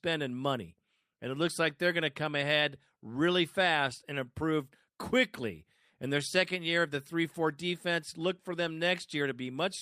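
Recorded speech in which no technical fault can be heard anywhere in the signal.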